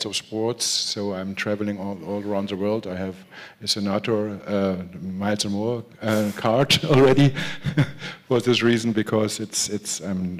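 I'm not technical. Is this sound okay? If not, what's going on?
Yes, nothing in this sound points to a technical problem. There's no glitch or dropout anywhere for you to worry about.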